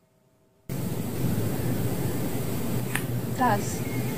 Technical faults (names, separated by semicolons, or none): doubled audio track